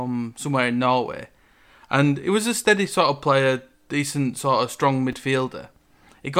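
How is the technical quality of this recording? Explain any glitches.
One brief glitch mars the speech, near the end of the recording.

At 5.12 s there is a case of chunks out of order: a tiny slice of audio, about 5.3 ms long, arrives one chunk late and plays after the slice that should have followed it. Nothing goes missing, but swapping the two creates three abrupt joins within roughly 11 ms. It is heard as a quick jumbled stutter. A waveform would show sudden steps at those joins, and a spectrogram would show thin vertical broadband streaks clustered at that instant.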